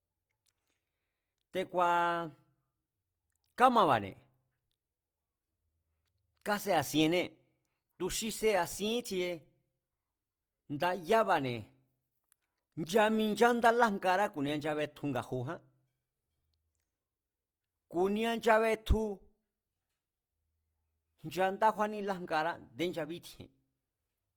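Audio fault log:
Throughout, Opus compression: the speech sounds grainy and rough, likely from low-rate CELT band filling that fits 24 kbps, with bandwidth still reaching 20.3 kHz.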